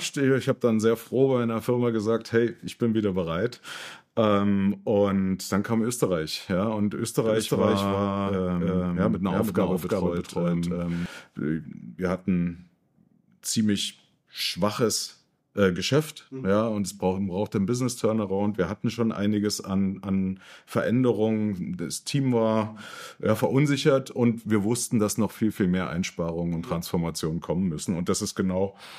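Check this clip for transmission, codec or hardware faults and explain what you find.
One fault stands out: a doubled audio track, from 7.26 s to 11.06 s. For those 3.8 seconds, a second copy of the same sound runs behind the first. It trails by roughly 0.3 seconds and sits at about the same level. The copy is full-band, with no decay or room colour. It cuts in and out abruptly. That points away from an acoustic echo. The likely cause is a second capture path running slower than the first.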